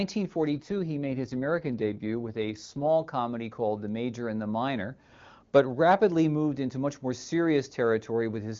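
From 0.56 s to 2.87 s the speech turns rough and synthetic. This is an AMR rate drop. A weak radio link made the network push the wideband AMR codec to a lower rate, spending the freed bits on error protection. The sound points to a fall from 23.85 kbit/s to around 8.85 kbit/s. The bandwidth stays the same and nothing drops out. The raspy, buzzy texture lasts until the rate recovers at 2.87 s.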